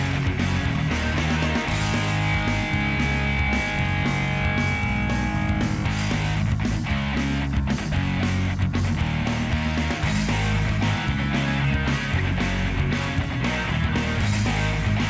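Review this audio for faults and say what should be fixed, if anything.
No faults; nothing needs fixing.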